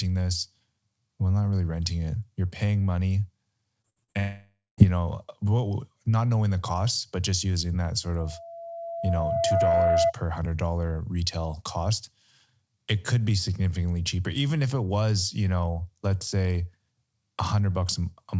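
From 3.82 to 4.17 s, just after "paying money", there is repeated packet loss with a robotic sound. The stream breaks up four times in about a third of a second. The longest hole is roughly 61 ms. Each gap is filled by stretching the last sound, so over 40% of that span is synthetic continuation. The result is choppy, with fragments of the sound missing between the patched pieces.

Straight after, from 4.20 to 4.80 s, comes what is likely a long network dropout. Almost 0.6 s of audio never plays. The receiver first extends the last sound as a fading buzz, and for the final 0.19 s or so there is only silence. The sound resumes at "you know" with the lost portion gone rather than delayed.

From 8.19 to 10.13 s, after "just using that sort", a loudspeaker feedback squeal appears. The microphone is picking up the speaker it feeds, and at 672 Hz the loop gain exceeds one. That tone grows on its own over about a second and a half until it sits roughly 5 dB above the speech, a steady howl. 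It clears by "hundred dollar retail cost". Throughout the clip the call path's G.722 coding leaves nothing above 8 kHz.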